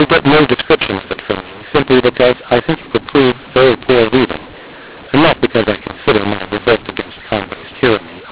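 From start to finish the speech carries a mu-law and A-law mix-up: the audio was encoded with A-law but decoded as mu-law. Because the two logarithmic curves assign different levels to the same 8-bit codes, sample amplitudes are remapped unevenly, some too loud, some too quiet. The result is a harsh, gritty distortion on every syllable, and the near-silent samples are pushed well above silence, so pauses fill with hiss. The 8 kHz G.711 band limit, nothing above 4 kHz, is heard as expected.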